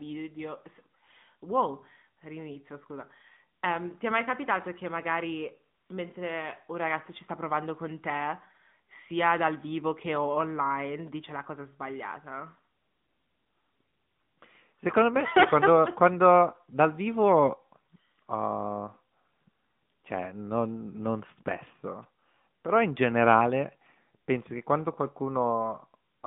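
Muffled, telephone-like speech with a buzzy, synthetic edge runs throughout, band-limited to about 150 Hz to 3.6 kHz with nothing above 3.7 kHz. This is AMR narrowband mobile codec damage: 8 kHz sampling plus plainly audible vocal-tract modelling artefacts, which fits roughly 10.2 kbps AMR-NB.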